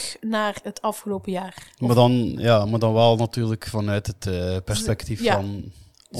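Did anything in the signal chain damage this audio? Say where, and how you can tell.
No, I can't hear damage from any stage of the signal chain anywhere in this speech.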